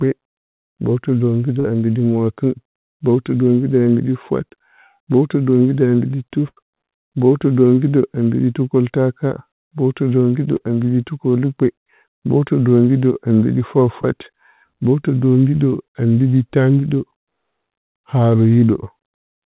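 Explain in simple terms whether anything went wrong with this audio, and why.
Three tiny smears or wobbles in the speech are heard at 1.6 s (right after "mbowtɨ dombiɗə"), 10.57 s (just before "ambiɗi tukəlukpe mbowtɨdombiɗə a") and 14.02 s (right after "tukəlukpe mbowtɨdombiɗə a mbiɗi"). Each is short concealed packet loss: 20 to 40 ms of the call arrived too late, so the receiver stretched the preceding sound to cover the hole.

A longer blip at 6.48 to 6.59 s sounds like a brief held buzz or fading hiss, then the speech jumps ahead. This is a burst of packet loss. About 80 ms of audio was lost in a row. The receiver kept extending and fading the last sound, and that stretch of speech is gone.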